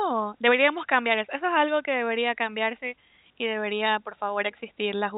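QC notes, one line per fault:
No faults to note.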